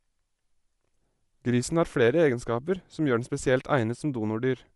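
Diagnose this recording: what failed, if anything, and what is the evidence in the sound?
Codec stage: the speech likely passed through Bluetooth LC3 compression, and the damage is plainly audible. Nothing remains above 11.5 kHz, and the top band sounds breathy and grainy, which fits LC3 near 48 kbps with 10 ms frames discarding upper spectrum and filling it with noise.

Converter stage: two devices ran on unsynchronised clocks, so one sample was dropped or repeated whenever the drift reached a full sample. Faint regular clock slip clicks come roughly every 0.7 s, about seven from 0.14 to 4.51 s, suggesting a mismatch of a few tens of ppm.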